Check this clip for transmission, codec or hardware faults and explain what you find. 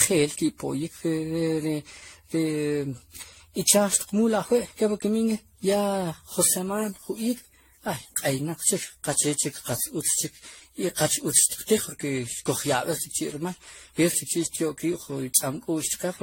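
One codec fault runs through the whole speech clip: generation loss. Across all of it the sound is swirly, smeared and hollow, with blurred consonant attacks and nothing above 16.5 kHz. This likely comes from around ten rounds of decoding and re-encoding with AAC-LC at a setting that fits 64 kbit/s. Each pass requantises on a shifted frame grid, so noise and spectral gaps pile up. A single encode at that rate would sound cleaner, without this cumulative hollowness.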